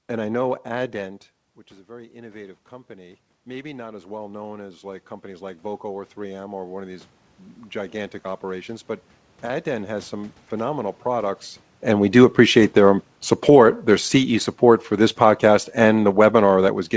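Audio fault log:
1.85 to 7.15 s, automatic gain rising: just after "which is a", the voice has dropped by about 16 dB as the talker moves away from the mic around 1 s. The AGC reads that as too quiet and slowly pulls its gain up by about 12 dB over five seconds or so. Since it's turning up the whole input, the room noise swells right along with the voice, and that shared slow rise is what gives it away.
11.97 to 13.64 s, automatic gain falling: the talker moves around 11 s, and the AGC finds the input too loud. Over about 1.7 seconds it eases the gain down by about 4 dB. The voice sinks, and the background noise sinks with it. The whole thing rides on a call path whose top end stops at 8 kHz, which fits G.722 wideband.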